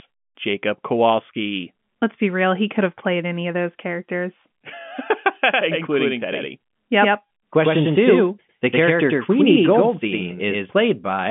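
From 5.53 s to 10.81 s the speech carries a doubled audio track: a second, equally loud full-band copy trails by about a tenth of a second, likely from an edit holding two copies out of step. It sounds like a hard slapback without room tail. The waveform shows each onset repeated, and the spectrogram shows every syllable smeared twice, with the copy appearing and vanishing abruptly.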